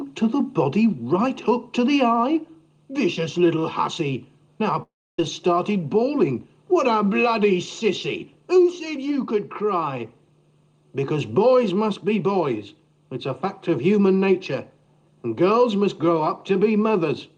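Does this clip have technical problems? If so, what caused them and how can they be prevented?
Yes. From 4.82 to 5.19 s, a long network dropout likely stopped packets arriving; the receiver stretched the last sound into a fading buzz, then left near-silence. More redundancy, such as forward error correction or a steadier network link, would prevent this.

From 5.75 to 6.48 s, a jitter buffer speed-up trimmed pitch-period pieces totalling about 50 ms, so the audio runs about 6% fast at unchanged pitch. Reducing delivery jitter would keep the buffer near its target and avoid this.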